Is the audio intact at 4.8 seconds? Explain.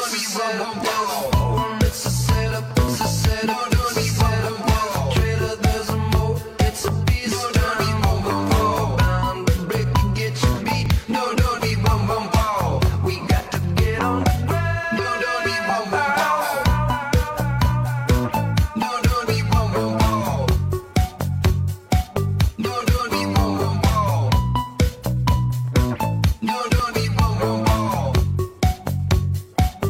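Yes, the audio is intact at 4.8 seconds, with no dropout, click, distortion or other fault at that moment.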